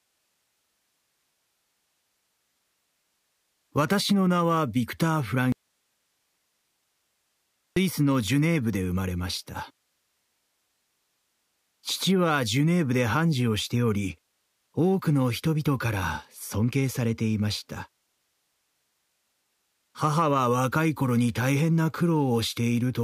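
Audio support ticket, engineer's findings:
Faint rapid ticking, near a soft rattle, 0.13–23.01 s, roughly every 70 ms. Clock slip clicks, likely from unsynchronised device clocks about 300 ppm apart dropping or repeating single samples.

Abrupt cut to bare hiss, about 50 dB down, 5.52–7.76 s (2.24 s). Audio dropout to a faint residue, likely signal lost upstream while the downstream path stayed live.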